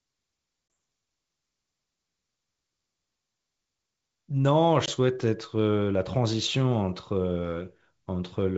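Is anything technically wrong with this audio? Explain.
Yes. At 0.74 s and again from 4.86 to 4.89 s, the speech drops into a hard-edged gap of about 20 ms, then resumes slightly distorted before settling. This is packet loss on an ADPCM call: roughly one packet goes missing each time, so the decoder's adaptive predictor and step size drift out of step with the sender's. The G.722 wideband coding underneath stays clean, with speech extending up to 7 kHz.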